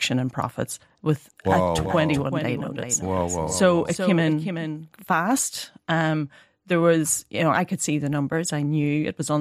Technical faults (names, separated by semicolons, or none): doubled audio track